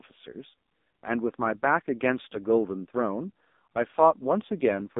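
AMR narrowband mobile codec damage runs throughout: the speech is squeezed into roughly 200 Hz to 3.7 kHz, with nothing above 3.8 kHz. Heavy modelling artefacts make it buzzy and synthetic, which points to one of the lowest AMR-NB modes, around 5.15 kbps.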